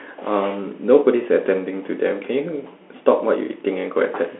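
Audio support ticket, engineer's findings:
Bluetooth CVSD headset codec, throughout. Narrowband, audible 250 Hz to 3.4 kHz only; spectrogram shows a hard ceiling near 3.4 kHz, empty low end. One-bit delta coding with adaptive step, consistent with a 64 kbps link; granular hiss floor, slope-overload roughness on fast peaks.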